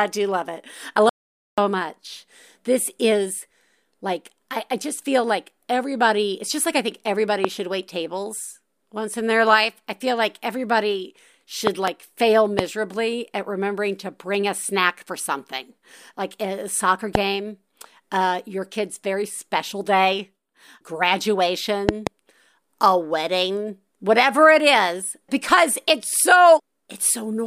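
At 1.09 s, just after "do love it I", an audio dropout to silence cuts the sound to silence for about 0.48 s, likely a momentary lost input. Unlike a quiet pause, no room tone remains. Loud pops follow at 7.45, 11.67 to 11.90 (a pair, after "I feel like everybody"), 12.59, 17.15 (after "something like a soccer") and 21.89 to 22.09 (a pair). These sharp thumps stand roughly 20 dB above the speech, likely voltage spikes from a plug or static. Unlike a dropout, the speech carries on underneath them.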